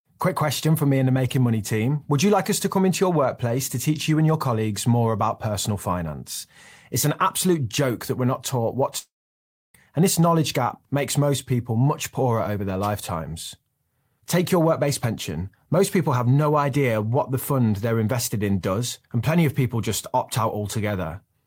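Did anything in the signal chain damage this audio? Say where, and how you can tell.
Yes, at the network stage, most likely a long network dropout. Right after "we're not taught what", at 8.98 s, the sound carries on as a fading buzz for about a tenth of a second, then goes silent for about 0.64 s before resuming at 9.75 s with "and this knowledge gap". Roughly 0.76 s of audio is gone. The receiver's concealment smeared the last sound before giving up. A storage or editing cut would drop straight to silence, and a brief packet loss would be patched over in milliseconds.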